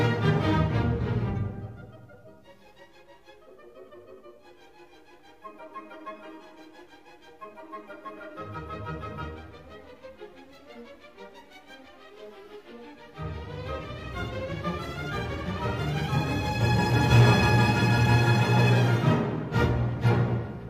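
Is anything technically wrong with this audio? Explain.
Yes. AAC frame loss with concealment occurs twice, at 8.16–8.22 s and 20.41–20.47 s. Each gap fits one lost 43 ms frame, which the decoder rebuilt from the previous spectrum, leaving a brief smeared, noisy patch. A spectrogram shows a short blurred vertical band where the detail is lost.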